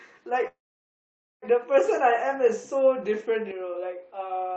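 Speech heard over a call breaks off at 0.47 s, where the sound trails into a brief fading buzz and then goes completely silent for most of a second before picking up again at 1.45 s. The talk resumes exactly where it stopped, so nothing is lost. The whole passage is simply pushed later by about 0.95 s. This is a call audio freeze, likely from packets stalling in transit so the jitter buffer ran dry and the receiver had to pad the gap. From 3.51 s to the end the tone abruptly turns duller and a little quieter, with no gap at the change. Everything above 5.2 kHz vanishes, well below the brighter band heard earlier in the call, and a faint new noise floor sits far beneath the speech. That points to the input switched to a poorer device mid-recording, likely a narrower-band microphone or a headset's call profile.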